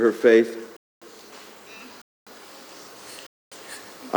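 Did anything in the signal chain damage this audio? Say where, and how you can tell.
Yes, there are gaps between chunks at the storage or playback stage. Hard-edged 250 ms silences fall at 0.77–1.02 s, 2.02–2.27 s and 3.27–3.52 s, one after each 1 s chunk. On a spectrogram they are clean vertical blank bands. The waveform drops abruptly to silence.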